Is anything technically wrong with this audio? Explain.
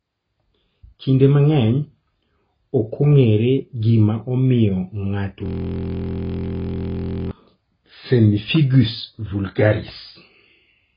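Yes. Throughout, the speech is dull and smeared with no content above 5 kHz, likely from heavy AAC compression at a very low bitrate, around 16 kbps.

From 5.46 to 7.31 s, a system hang loop repeats one 23.2 ms slice roughly 80 times. This fits a 1024-sample buffer replaying and produces a steady 43.1 Hz buzz.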